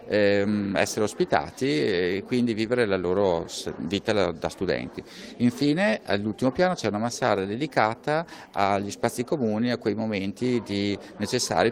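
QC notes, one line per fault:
Nothing stood out on listening.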